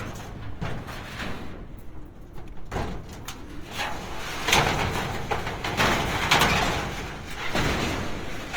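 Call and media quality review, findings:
Opus compression, throughout. Tones rough, grainy and noisy rather than swirly; few spectral holes. Likely CELT music mode at a rate fitting about 24 kbps: band energies kept, starved bands filled by folding or noise. Full bandwidth retained, content reaching 20.2 kHz.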